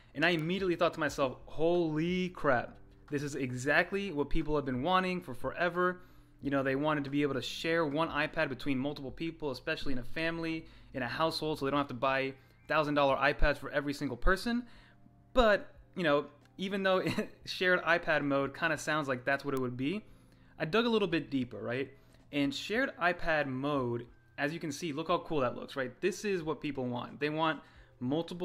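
Bit error spikes at 0.39 s and 19.57 s: in each, a single sample's value jumped by a power of two and snapped back, as if one bit flipped in storage or transit. Each is a sharp, broadband tick unrelated to the surrounding sound, peaking at about -23 dBFS and about -16 dBFS respectively.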